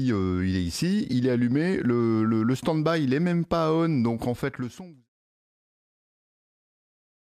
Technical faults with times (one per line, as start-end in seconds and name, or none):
none